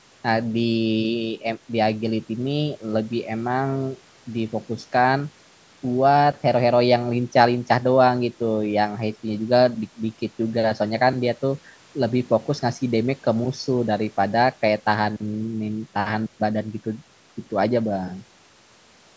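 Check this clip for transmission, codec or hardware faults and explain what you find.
Nothing stood out on listening to this speech, which carries the usual bass trim and 8 kHz upper limit of a call microphone path.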